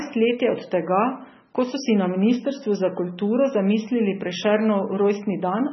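From start to finish the speech carries heavy coding damage, most likely MP3 compression at a starved bitrate, something like 16 kbps. There's simply nothing above 5.9 kHz, so the top end sounds dull and boxed in. With so few bits to go around, the encoder keeps dropping quieter frequency lines and bringing them back frame by frame, which gives that watery, swirly texture, chirpy s sounds and softened attacks.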